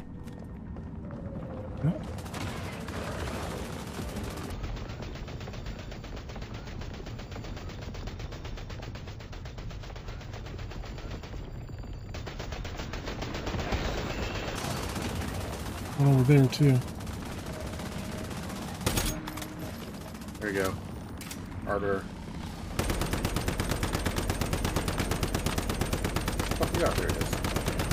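From 4.51 s to 14.56 s the sound suddenly drags to half speed and drops a full octave, 12 semitones down. That's stereo read as mono: the left and right samples, which alternate in the stream, got played back one after another as though they were a single channel, so every stretch of time takes twice as long. You'd also catch a fainter mirrored copy of the sound sitting up in the top half of the spectrum.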